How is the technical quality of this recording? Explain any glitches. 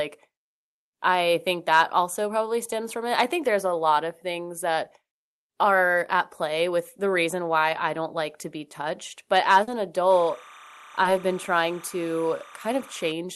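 The recording has three glitches: two brief dropouts and a stretch of interfering tone. The speech comes through a call codec whose band stops at 12 kHz, consistent with Opus at around 32 kbps.

Short concealed packet loss occurs at 9.63–9.80 s and again at 11.03–11.07 s. Audio packets arrived too late for the decoder, so the receiver invented replacement sound, about 40 ms in the first case and 20 ms in the second, by extending the preceding sound and then crossfading back. Each gap is heard as a quick smear or wobble. On a spectrogram, harmonics flatten or blur briefly, and the waveform shows a slightly too-regular stretch.

Timecode bleed runs from 10.10 s to 13.12 s. Linear timecode from an adjacent line leaked into the signal. It is a square wave that flips between tones near 1 kHz and 2 kHz as it encodes bits, repeating at 29.97 frames per second. It sits about 20 dB below the speech and is heard as a steady chirping warble underneath. 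A spectrogram shows persistent horizontal bands at those two frequencies with their odd harmonics stacked above.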